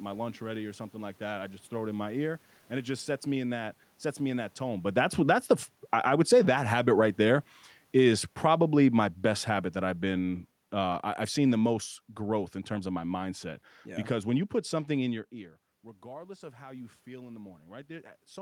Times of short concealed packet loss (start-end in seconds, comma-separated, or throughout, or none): none